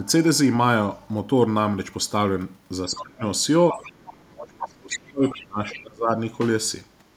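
Speech suppressed in double talk appears at 0.0–0.08 s and 3.73–3.78 s as slight dips, and at 2.86–3.23 s and 4.26–6.11 s as deep drops of about 30 dB. The echo canceller likely couldn't separate the talker from loudspeaker echo while both sides spoke, so it turned this speech down. The other side's voice leaking through is heard faintly at 2.96–3.04 s, 3.72–4.25 s, 5.26–5.42 s and 5.7–5.8 s, roughly 15 to 20 dB below the speech, likely residual loudspeaker echo the canceller failed to remove.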